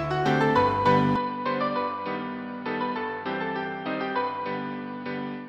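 The recording input was likely switched to a poorer device at 1.16 s, with no gap at the switch. From there to the end the audio loses everything above 5.5 kHz, drops by roughly 10 dB, sounds duller and boxier, and carries a faint new background noise.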